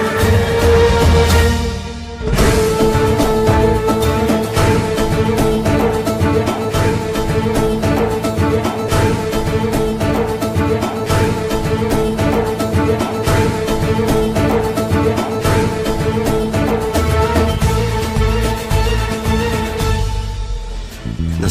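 Nothing in the recording stood out as a technical fault on listening.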